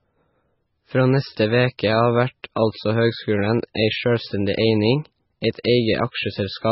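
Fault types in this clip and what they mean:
MP3 compression: The recording has likely been squeezed through an MP3 encoder at a very low bitrate, around what a 16 kbps stream would allow, so the encoder ran out of bits and cut the treble outright, leaving nothing above about 5.6 kHz. Weak frequency lines were zeroed and flicker in and out between frames, giving the speech a heavily watery, swirling texture, with sibilants turned dull and metallic and consonant attacks smeared.
Pre-echo: The transform codec spread its quantisation noise evenly across each block. Where a sharp onset landed late in a block, noise sized for the loud part leaked into the quiet moment just before it. Here a brief hiss of roughly 10 to 15 ms runs ahead of the attacks at 2.43, 2.55, 3.74 and 5.63 s, and each of those onsets sounds softened rather than crisp.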